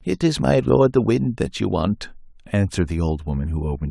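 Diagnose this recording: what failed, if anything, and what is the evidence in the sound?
Nothing failed; no fault can be heard anywhere.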